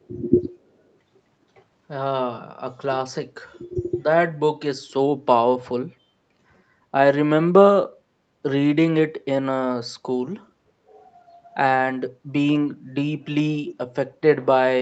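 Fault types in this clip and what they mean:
Echo leak: a very faint copy of the speech, delayed by about 372 ms, surfaces at 0.03 to 0.07 s, likely residue a speakerphone's echo canceller let through. Unlike room reverberation, it is a separate late repeat, not a smooth decay.
Speech suppressed in double talk: the voice sags or drops out at 3.52, 10.58, 12.17, 12.93 and 13.37 s, from mild to deep dips, likely an echo canceller ducking it while the far side talked. Unlike packet loss, the level sinks rather than glitching.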